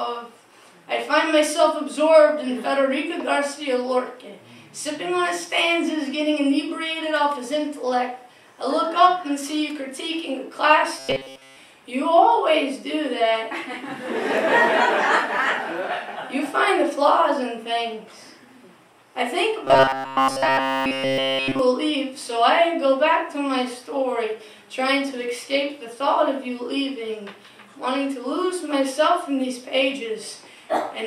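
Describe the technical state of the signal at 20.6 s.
At 20.6 s the audio is likely arriving too seldom, so the same short buffer is replayed instead of new material. This is robotic sound from repeated short buffers, spanning 19.65 to 21.59 s. Essentially everything there is repetition, locking the sound into a rigid, metallic 134 Hz buzz, which fits a buffer of about 7.5 ms.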